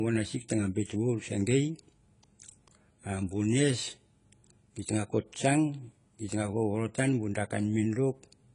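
Throughout, the speech is dull, with nothing above 10 kHz and a warbling, fizzy smear on sibilants that plain filtering lacks: likely AAC compression.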